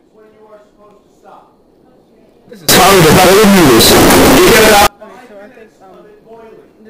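From 2.69 to 4.87 s, float samples were likely read as integers (float read as integer), squaring the waveform at an almost fixed, high level into a very loud, harsh blast.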